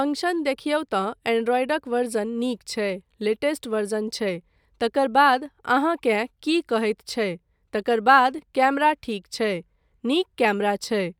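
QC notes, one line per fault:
7.39 to 10.40 s, periodic USB or driver dropouts: about four tiny ticks spaced 1.0 s apart in the speech, where something stalls the bus or driver and a sliver of well under a millisecond is skipped outright, so the waveform jumps and clicks.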